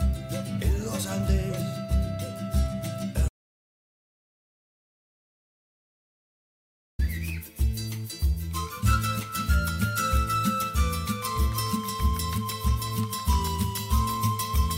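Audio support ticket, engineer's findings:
Audio dropout to silence, 3.29–6.99 s: sound cuts mid-flow to silence for 3.7 s, no room tone. Likely input lost (link, device or mute) while the recorder kept writing.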